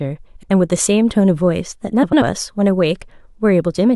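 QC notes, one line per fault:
0.36–0.50 s: frames out of order. Two adjacent 69.7 ms blocks play swapped, giving a brief garbled flutter, which fits three frames per block.
2.03–2.22 s: frames out of order. Two adjacent 92.9 ms blocks play in reversed order, causing a flutter, which fits four frames per block. No time is lost.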